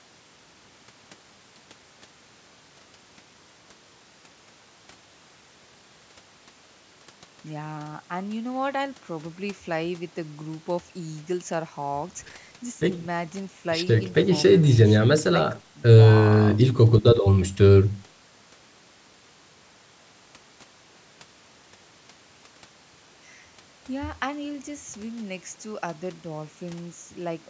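No technical faults can be heard anywhere in the speech. It carries the sound of a call's microphone processing, with the lowest bass trimmed away and nothing present above 8 kHz.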